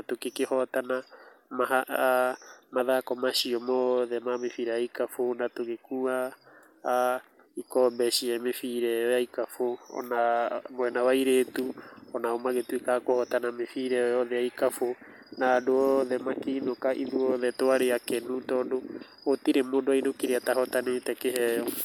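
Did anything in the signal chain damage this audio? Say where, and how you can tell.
No, nothing in the signal chain can be heard damaging this speech recording, and the signal stays steady and intact throughout.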